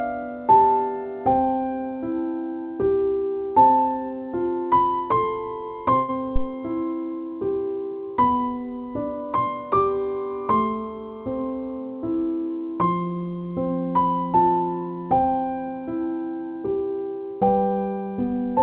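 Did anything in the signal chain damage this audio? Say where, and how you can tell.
Yes. At the network stage, a burst of packet loss hit between 5.96 and 6.10 s: about 120 ms of audio never arrived. The receiver stretched the last sound and let it fade across the gap, then resumed further on with that stretch missing.

In the analogue wiring, a phantom power thump sits at 6.36 to 6.49 s. A supply switching on or off on the live input sent a voltage step through the coupling capacitors, heard as a deep thump that dies away within about 29 ms, over audio already band-limited to 4 kHz by the call codec.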